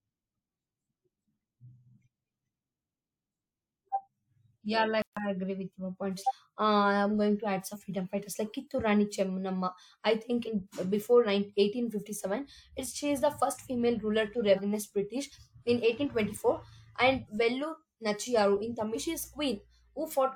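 At 5.02 s the speech drops out for about 150 ms, then picks up where it left off, likely a playback stall from the player running dry. After that come compressed frames skipped at 6.27 s (after "agree with your points"), 7.72, 10.45, 14.55 and 18.94 s. Each is a jump where roughly 100 to 300 ms of speech, whole 42.7 ms frames, just vanishes.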